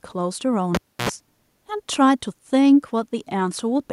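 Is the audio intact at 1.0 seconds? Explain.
No, 1.0 s lands inside a cable pulled and plugged in, running 0.75 to 1.09 s. A pop starts it, then roughly 300 ms of near silence while the lead's out, then about 76 ms of 60 Hz mains buzz as the tip touches, and another pop as the speech returns.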